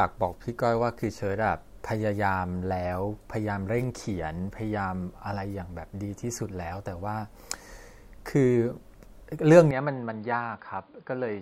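At 9.71 s the speech abruptly loses its top end and stays that way to the end of the clip at 11.42 s. Nothing is left above 4.9 kHz, so it turns dull and boxy. The level falls by roughly 5 dB and a new noise floor appears, around 35 dB below the speech. There is no gap at the transition. This is likely an input switched to a poorer device, with the recording path moving mid-take to a narrower-band microphone or headset profile.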